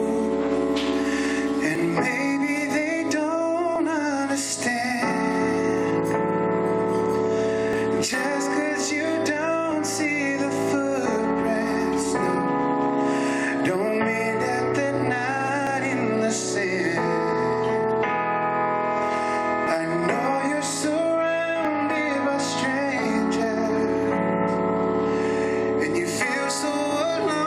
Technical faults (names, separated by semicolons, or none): overlap between stream segments